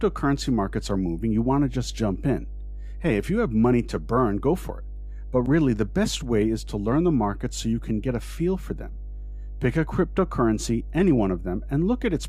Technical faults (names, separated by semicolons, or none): mains hum